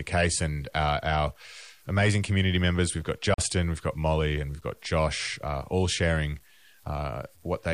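From the start, the speech carries a grainy, rough edge that follows the voice. The grit sits roughly 35 dB below the signal, so quiet syllables and word tails sound harsh and crumbly. This is low bit depth without dither, likely truncated to about 8 bits. Each sample was cut to a coarse step with no added noise to smooth it. The error therefore tracks the signal and changes with every sound.

At 3.34 s the audio stops dead. The gap lasts about 41 ms and ends at 3.38 s. When sound returns, it has moved on, as if it kept playing through the silence. This is a Bluetooth dropout. Audio packets likely failed to reach the headphones in time, so the output fell silent. The length fits two lost packets.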